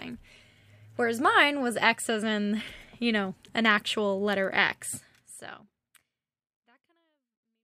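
No technical faults are audible.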